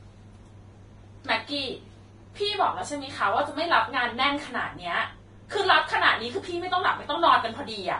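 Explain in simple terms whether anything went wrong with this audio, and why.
Throughout, the speech sounds grainy and hissy, with nothing above 10.6 kHz: likely heavy Vorbis compression, turning treble into noise, unlike a plain filter's silence.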